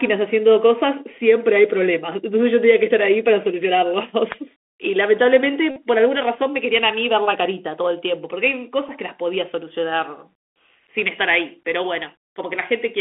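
Throughout, the Bluetooth CVSD headset codec limits this speech to roughly 250 Hz to 3.4 kHz, consistent with a 64 kbps narrowband link, with granular hiss, scratchy sibilants and plainly audible slope distortion. From 5.71 to 5.78 s a Bluetooth headset packet was repeated over a run of about 52 ms, producing a steady buzz near 267 Hz. A single repeated packet at 8.88 to 8.91 s causes only a brief tick.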